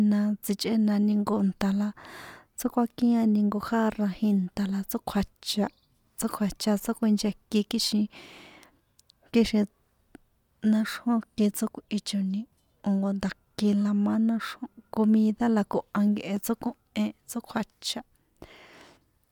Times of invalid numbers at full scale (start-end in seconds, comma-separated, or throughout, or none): none